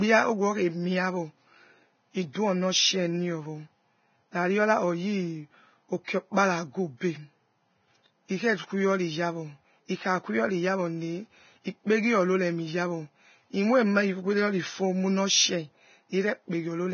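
Speech runs through the whole recording with heavy coding damage: nothing is present above 6.6 kHz, and the remaining treble is hissy and grainy, with tones roughened and attacks blurred. This is likely Vorbis compression at a very low bitrate, somewhere near 17 kbps, where the upper residue is quantised so coarsely that fine detail turns into noise of similar energy. On a spectrogram the content stops at a flat ceiling at 6.6 kHz, and the band below it looks speckled and blotchy instead of showing clean harmonic lines. There are two audible instances of pre-echo, from 2.33 to 2.35 s and from 6.04 to 6.08 s. Each time a short hiss arrives just before a sharp onset, lasting about 22 ms and 33 ms respectively, and the attack itself sounds softened. This happens because the transform codec spreads the quantisation noise for the loud onset across its whole block, so the noise also fills the silence ahead of it. 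On a waveform a low fuzzy smear leads each transient, and on a spectrogram a faint broadband haze appears just before the onset's vertical stripe.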